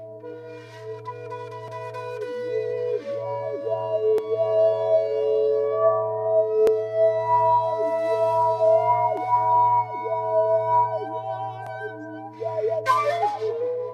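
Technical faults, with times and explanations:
1.68 to 11.67 s, clock drift buffer slips: a click recurs every 2.49 s. Likely two mismatched clocks, a few hundred ppm apart, dropping or repeating around 30 samples.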